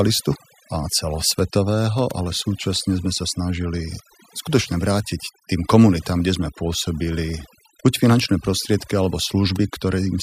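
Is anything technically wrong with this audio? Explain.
Yes. Throughout the speech, the background drops and breaks up into twinkling specks. This is overdone noise removal: a denoiser set too aggressively cuts individual frequency bands that sit near its noise estimate, taking quieter voice detail with them.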